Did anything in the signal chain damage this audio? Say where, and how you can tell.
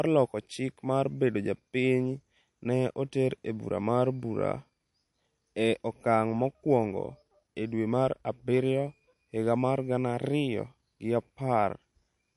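Yes. Throughout, the speech sounds watery and swirly, with nothing above 11.3 kHz: likely MP3 compression at the codec stage, starved of bits as a 48 kbps stream would be.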